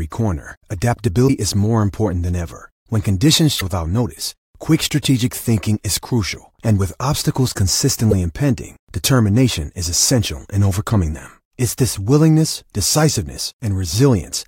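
At 1.24 to 1.30 s, just before "is more important than", at 3.57 to 3.62 s, ahead of "without notice quick strategic", and at 8.10 to 8.13 s, before "impending determination is essential", the speech breaks into a short chirp or blip. Each is damaged data in a compressed stream: the decoder misreads corrupted frames and loses sync until it finds a valid header. On a spectrogram each shows as a brief smeared vertical block; the waveform shows an abrupt discontinuity.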